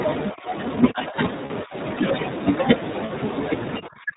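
You're hearing a speech recording that has come through the iLBC codec, and the codec damage is plainly audible from start to finish. Everything above 4 kHz is gone, so the voice sounds narrowband and boxy, with that slightly rough, synthetic grain iLBC leaves on speech because it rebuilds the excitation one frame at a time. The texture fits the 15.2 kbps mode with 20 ms frames. Four stretches sound like speech suppressed in double talk. The voice dips hard or thins out at 0.32 to 0.54 s, 0.92 to 1.17 s, 1.64 to 1.75 s, and again from 3.8 s to the end. The drops run from roughly 15 dB in the shallowest spot to around 30 dB in the last one. It behaves like an echo canceller pulling the talker down while the far end was speaking, so that's the likely cause, though nothing in the clip itself proves the other side was talking. There are also two short lost iLBC frame gaps, at 1.46 to 1.51 s and 3.06 to 3.11 s, each about 40 ms, which fits two missing frames apiece. 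In each gap you hear a brief held, faintly buzzy vowel-like smear where the decoder repeats the last pitch cycle with some noise mixed in. Right after each gap the voice snaps back cleanly, since every iLBC frame decodes on its own without needing the one before.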